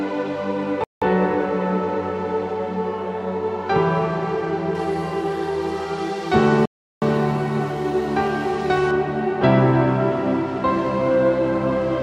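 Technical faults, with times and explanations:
0.84–1.02 s, playback stall: the audio drops to silence for about 0.18 s mid-flow and then resumes. The gap is silence, as when the output device is fed nothing. The likely cause is the player running short of buffered data, or its audio thread being blocked, so nothing reached the output until it caught up.
4.75–8.91 s, pre-emphasis left on: the treble rises to about 14 dB above the 1 kHz level by 10 kHz. This follows the FM 75 µs curve, with its matching de-emphasis never applied. The top octaves are therefore exaggerated, and the sound turns thin, bright and hissy, with sharp sibilance.
6.66–7.02 s, playback stall: a second, longer dropout of about 0.36 s falls inside the over-bright section, again a hard cut to silence before the sound continues. It is likely the same starved or blocked playback path, here taking roughly twice as long to recover.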